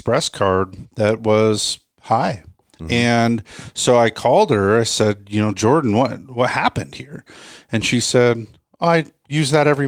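A speech recording with no technical faults to report. Nothing in it calls for a time or a cause.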